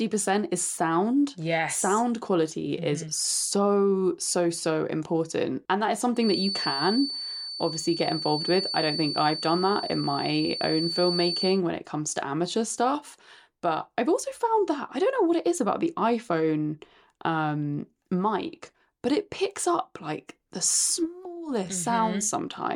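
A speech recording in which, from 6.13 s to 11.62 s, a thin, steady whistle at 4.5 kHz sits behind the talker, only a few decibels below the speech and swelling and fading slowly in level. This is a feedback whistle: the likely cause is sound from a loudspeaker reaching the microphone with the loop held right at the edge of instability, so that single frequency keeps ringing without building into a full howl.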